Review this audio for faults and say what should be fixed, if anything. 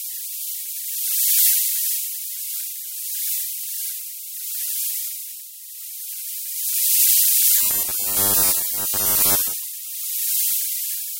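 From 7.58 s to 9.55 s the sound turns into a rigid, metallic buzz fixed at 100 Hz, while its overall shape is still roughly followed. This is robotic sound from repeated short buffers. The likely cause is audio arriving too seldom, with playback filling each gap by looping the last 10 ms of audio. Across this stretch most of the real audio, around 70 percent, is skipped in favour of these repeats. To prevent it, enlarge or adapt the jitter buffer and use proper concealment instead of raw buffer repetition.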